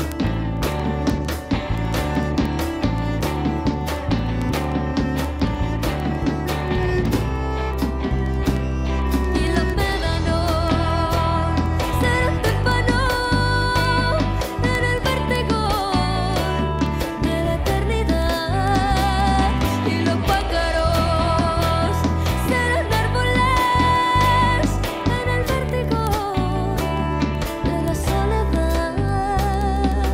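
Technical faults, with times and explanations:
0.12–30.07 s, word clock ticks: sharp clicks of uneven strength recur roughly every 70 ms, around 400 in all. The receiving device runs unlocked from the sender, about 300 ppm apart, so a single sample is dropped or repeated at each slip.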